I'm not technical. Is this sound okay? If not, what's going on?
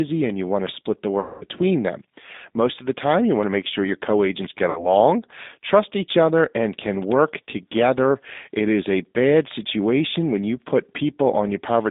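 No. The whole recording went through the G.729 codec, a phone-call compressor. It sounds thin, slightly rough and a bit artificial throughout. There are also two spots of VoIP packet loss concealed by the speech codec. Pieces of the call went missing, and the system filled the gaps by guessing. From 1.20 to 1.45 s the sound smears into a fading buzz or noise, and it happens again, more briefly, from 4.70 to 4.88 s.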